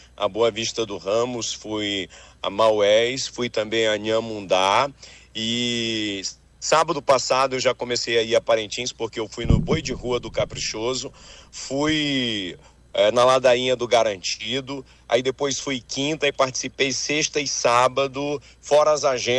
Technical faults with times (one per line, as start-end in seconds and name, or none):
none